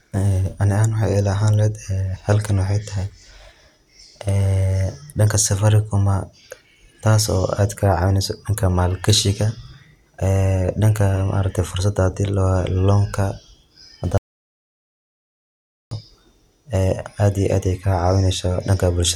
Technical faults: audio dropout to silence

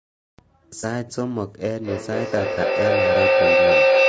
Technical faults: low-delay AAC compression; AAC frame loss with concealment; feedback howl

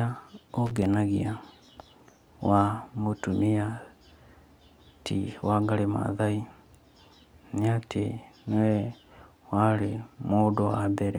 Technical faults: loose connector crackle

